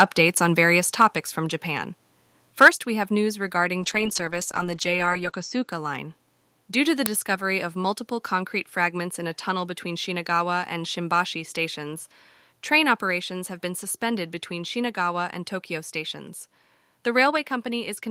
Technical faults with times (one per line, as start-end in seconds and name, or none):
0.00-0.04 microphone overload
1.02 microphone volume stepped down
2.61-2.68 microphone overload
2.68 microphone volume stepped down
3.81-5.73 call bitrate drop
7.06 uninitialised buffer
13.11 microphone volume stepped down